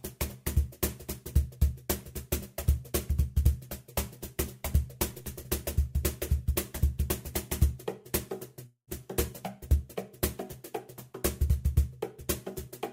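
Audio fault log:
8.66 to 8.89 s, long network dropout: The sound stops arriving and the final fragment is stretched into a buzzy hiss that fades over about 0.21 s. Near the end of the gap there is about 0.11 s of silence. The audio then resumes, but roughly 0.22 s of material is simply gone. This is likely a network stall, where the receiver smears the last sound to cover the hole, runs out of anything to continue, and then skips ahead.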